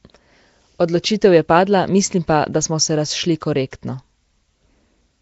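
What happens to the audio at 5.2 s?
At 5.2 s the speech still carries the Nellymoser compression heard throughout. It sounds rough and hissy, smeared underwater, with nothing above 7.7 kHz, likely from starved, noise-filled bands.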